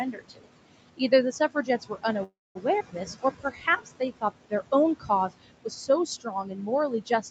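Noise suppressor artifacts run through the whole clip. The steady room noise, which sits about 14 dB under the speech, is pulled down by about 21 dB between phrases and rises back under them. Unlike a clean gate, this pumping follows the speech frame by frame.

Speech cut by the noise suppressor first appears from 0.12 to 0.48 s, where roughly 300 ms of soft speech drops by up to about 20 dB. It returns over about a second in total between 0.80 and 4.53 s, again up to about 20 dB, and from 5.00 s to the end, up to about 18 dB. The quiet sounds are swallowed along with the background instead of the background alone sinking.

A call audio freeze runs from 2.23 to 2.57 s. A fading buzz or hiss continues the last sound, then about 210 ms of silence follows before the speech resumes where it stopped, adding 318 ms of delay. A late packet that emptied the jitter buffer is the likely cause. Nothing is lost, which sets it apart from a skip.

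A skip ahead follows at 2.79 to 2.82 s. About 150 ms of speech is missing, and the two sides are joined by only 10 ms of fill, so the sound lurches forward with no audible pause.

A jitter buffer slow-down stretches 3.13 to 4.14 s to 87% speed, adding 133 ms. The pitch stays the same and the sounds are drawn out, unlike the freeze's stall and silence.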